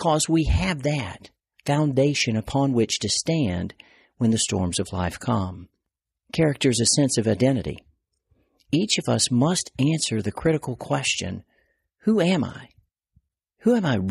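A speech recording, and nothing is technically wrong with it.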